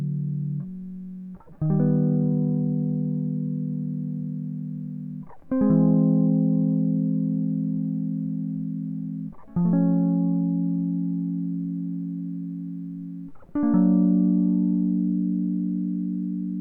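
No technical faults in this music.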